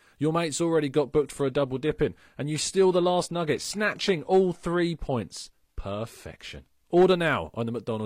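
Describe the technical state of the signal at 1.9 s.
At 1.9 s the audio is inside a stretch of adaptive stream at a lower bitrate, running from 1.02 s to 7.02 s. The player appears to have dropped to a cheaper rendition when the connection slowed, then switched back. The swap is abrupt and gapless. Through that span the speech loses its top end, with nothing above 14.9 kHz, and codec artefacts thicken, which fits a shift from roughly 96 kbit/s AAC to a low-rate HE-AAC stream.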